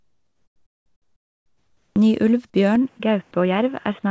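Comfort noise in place of the background runs from the start of this speech recording to 1.96 s. The quiet stretch before the talker begins is a steady, featureless hiss, about 2 dB different in level from the real background and sitting about 50 dB below the loudest speech. This is likely discontinuous transmission: the sender's voice detector stopped sending during the pause, and the receiver synthesised shaped noise to fill it instead of passing the true room sound. At the end of that stretch is an onset clipped by the voice detector, from 1.93 to 1.96 s. The first 30 ms of the speech are missing, so the opening sound begins abruptly, without its soft attack, and the comfort noise is heard where it should be. The likely cause is a detector that was slow to register that speech had resumed. Those lost frames were never sent, and the synthetic noise covered them. From 2.76 s to the end, the input switched to a poorer device. 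The sound turns duller and boxier, with nothing above 3.6 kHz, compared with the roughly 8 kHz bandwidth of the G.722 call path used before. That path's coding and bandwidth fit a 64 kbps setting. The change is immediate, with no gap at the switch and roughly no change in level. A new noise floor appears, around 40 dB below the speech, which likely comes from a different microphone or a headset's call profile taking over. Inside that section, a short concealed packet loss at 2.98 to 3.01 s leaves a brief smear. About 20 ms of audio never arrived, and the receiver extended the preceding sound for about 14 ms before blending back into the real signal.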